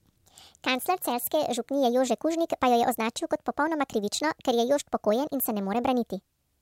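From start to finish, the speech plays at a wrong sample rate. It runs about 1.38 times too fast and sits 5.55 semitones high. This fits 32 kHz audio played back at 44.1 kHz without conversion. Voices sound high and hurried.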